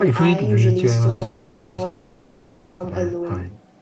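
Three call audio freezes hit the speech at 1.09 to 1.23 s, 1.23 to 1.80 s and 1.84 to 2.82 s. Each stretches the last sound into a fading buzz, likely from delayed packets draining the jitter buffer, then resumes with nothing lost.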